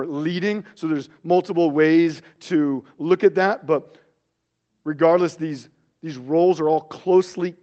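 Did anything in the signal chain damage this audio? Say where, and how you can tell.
No, nothing in the chain damaged this speech.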